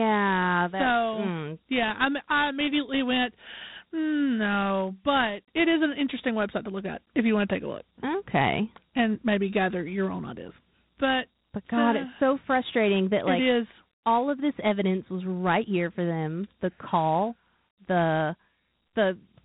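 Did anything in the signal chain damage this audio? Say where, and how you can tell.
Yes, at the codec: Dialogic VOX ADPCM throughout, with nothing above about 3.9 kHz and gritty hiss tracking the speech, which fits coarse 4-bit steps at 32 kbps.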